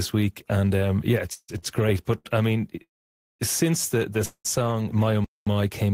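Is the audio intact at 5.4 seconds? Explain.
No. At 5.4 seconds the speech is inside a playback stall that runs from 5.24 s to 5.47 s, a gap of about 0.22 s. The speech stops abruptly mid-flow and the output stays silent for that span before resuming. The likely cause is the player running out of buffered data, or its output thread being blocked, so nothing reached the output until it recovered and playback picked up again.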